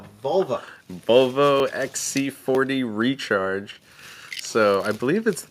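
At 0.68, 1.6, 2.55 and 4.13 s the sound jumps ahead, with about 10, 30, 20 and 20 ms missing respectively, likely a dropped buffer (overrun) while recording.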